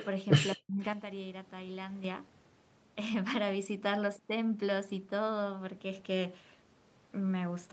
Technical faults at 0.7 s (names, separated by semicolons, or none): speech suppressed in double talk